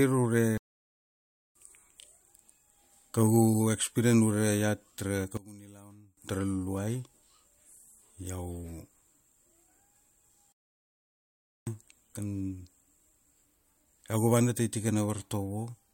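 From 0.58 to 1.55 s the speech drops out completely for about 1.0 s, a playback stall, likely from the player running short of data. The waveform flatlines and the spectrogram shows a blank vertical gap.

After "expirian ure iat ra", from 5.37 to 6.17 s, the speech falls by about 21 dB until "tara luluai". This fits one channel inverted, likely cancelling the centred content in a mono sum. It shows as a shrunken waveform with faint, sparse spectral energy.

A second stall runs from 10.52 to 11.67 s, leaving about 1.1 s of flat, empty silence.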